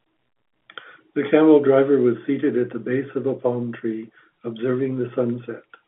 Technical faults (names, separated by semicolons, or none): none